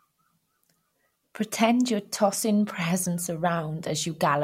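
No technical faults can be heard anywhere in the recording; the signal holds steady throughout.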